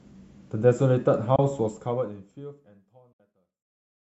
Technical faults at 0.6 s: none

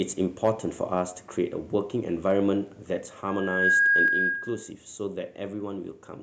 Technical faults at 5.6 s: none

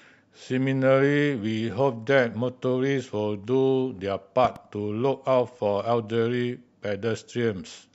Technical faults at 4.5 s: loud pop

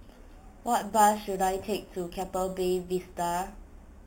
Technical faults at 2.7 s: imaging from sample-and-hold upsampling

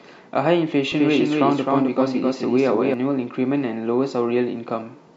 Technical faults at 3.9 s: none

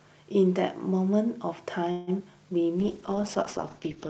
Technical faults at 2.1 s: call audio freeze; short concealed packet loss

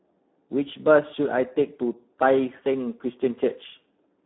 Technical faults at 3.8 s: Speex codec

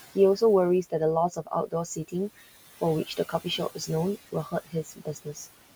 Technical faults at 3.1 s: noise suppressor artifacts; speech cut by the noise suppressor

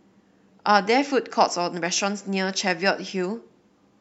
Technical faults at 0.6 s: none

